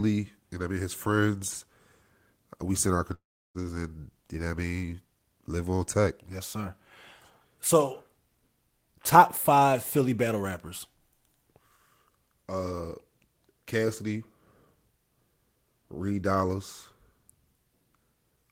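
At 3.13 s the speech breaks off and does not pick up again until 3.58 s. The last sound is stretched into a fading buzz, then about 340 ms of near-silence follows, and roughly 420 ms of speech is simply gone when the audio returns. A long network dropout is the likely cause. Unlike a brief packet loss, which is patched over almost unnoticeably, this gap outlasts the concealment and leaves an audible hole.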